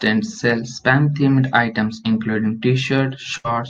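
At 3.37 s, near the end of the speech, a burst of packet loss cuts in and lasts until about 3.47 s. Several packets in a row never arrived in time, so the receiver stretched the last sound it had for about 70 ms, letting it fade. Playback then resumes with about 60 ms of speech skipped. On a spectrogram, the frequency content just before 3.37 s smears into flat horizontal streaks that weaken. The waveform shows a decaying repeated pattern and then an abrupt jump back to new material.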